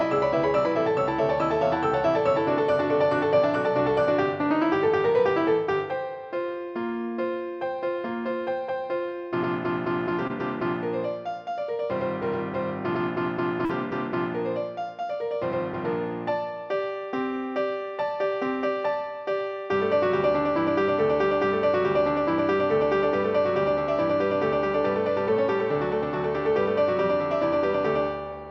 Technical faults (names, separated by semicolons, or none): short concealed packet loss